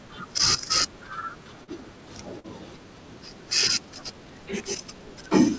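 Short concealed packet loss hits this speech recording twice, at 1.64 to 1.69 s and at 2.39 to 2.46 s. Each time about 40 ms of audio arrived too late to be decoded, and the receiver patched the gap by extending the preceding sound and then crossfading back, leaving a brief smeared wobble where the speech should be. The call path caps the audio at 8 kHz, which fits a wideband G.722 codec.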